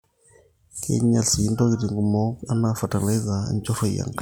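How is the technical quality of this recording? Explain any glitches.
No audible glitches or faults.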